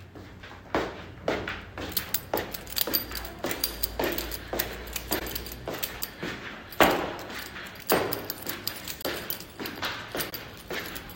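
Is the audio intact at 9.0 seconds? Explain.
No. From 9.02 to 9.05 s there is a brief fault. This is a corrupt frame concealed: flipped bits spoiled what sounds like a single AAC frame, and the decoder detected it and filled the gap itself.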